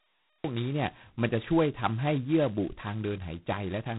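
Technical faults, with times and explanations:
0.0 to 0.44 s, cut-off start: digital silence, then the speech jumps in mid-sound at 0.44 s with no natural attack, because the recording began late.
Throughout, G.726 ADPCM: a harsh, rasping hiss rides on the speech and swells with its level, and nothing passes above 3.9 kHz. Such heavy damage fits the 16 kbit/s mode.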